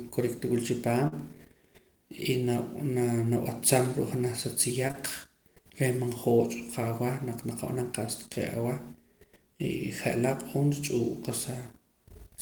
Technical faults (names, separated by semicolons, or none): burst of packet loss; short concealed packet loss